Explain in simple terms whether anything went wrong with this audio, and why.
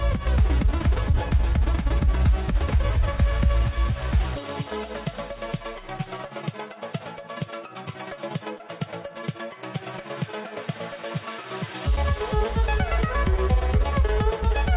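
One thing went wrong, at about 8.58 to 8.62 seconds. It is a short concealed packet loss. A tiny piece of the call, about 20 milliseconds, arrived too late to be played. The receiver covered the hole by stretching the sound just before it for about 15 milliseconds, then blended back into the real audio. You may hear a quick smear or wobble there. The call line also cuts everything above 4 kHz, so the clip sounds narrow throughout.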